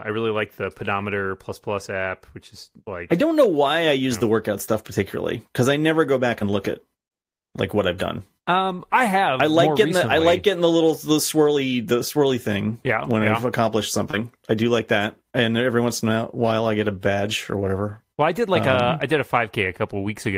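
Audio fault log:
6.55 s DC step: a single low thump lands beneath the speech, which carries on unchanged. At that instant the waveform's zero line jumps to a new offset, then creeps back toward centre as a 2 Hz high-pass drains the shift away.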